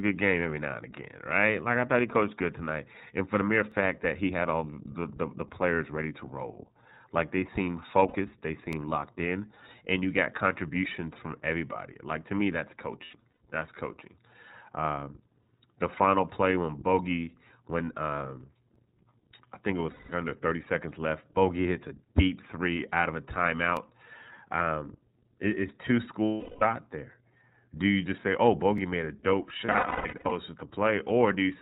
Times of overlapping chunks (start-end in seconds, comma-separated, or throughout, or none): 3.72, 8.73, 13.74, 18.76, 23.77, 28.78